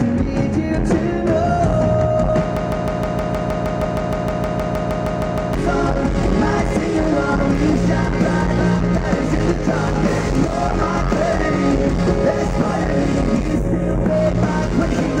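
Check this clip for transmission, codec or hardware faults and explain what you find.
One fault is present. From 2.57 to 5.54 s there is a broken-record loop: a 0.16 s fragment repeats exactly, back to back, 19 times, likely from a stalled stream resending its last fragment. The intended audio is lost, replaced by a stutter. Spectrogram and waveform show one identical short block tiled evenly.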